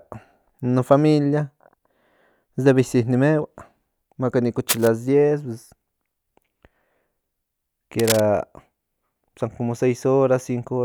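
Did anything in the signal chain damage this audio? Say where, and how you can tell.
Yes, in the analogue wiring. Two short bursts of cable scratch noise sit over the speech from 4.69 to 4.88 s and from 7.99 to 8.20 s, each only a few decibels below the speech level. They are dense, ragged rustles lasting about a fifth of a second, not single clean clicks or gaps, so a digital dropout or buffer glitch doesn't fit. The likely cause is a worn lead or connector being moved, with its contact resistance fluctuating rapidly.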